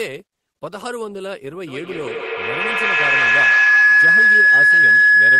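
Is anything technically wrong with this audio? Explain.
Yes. From 1.67 s to the end there is feedback howl: a microphone-to-loudspeaker loop gains level on every pass, narrowing to a tone near 1.5 kHz, with repeats about every 150 ms, that peaks about 15 dB above the speech. Unlike echo, its repeats grow rather than fade.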